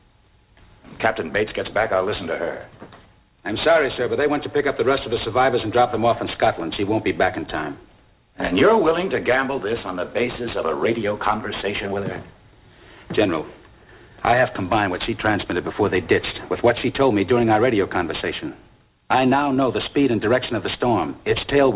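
Throughout the audio, high content sounds gritty and metallic, with false tones that don't belong to the source, about 20 dB below it. This is aliasing: frequencies above 4 kHz folded back because the sample rate was cut without filtering, which fits a drop from 44.1 kHz to 8 kHz.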